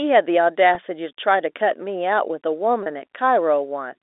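Packet loss with pitch repetition at 0.75 s and from 2.83 to 2.86 s in this telephone-band speech. The receiver bridges the gaps of 10 ms and 30 ms, which fit one and three lost 10 ms packets, by repeating the last pitch period, so each gap sounds like a brief held, buzzy tone.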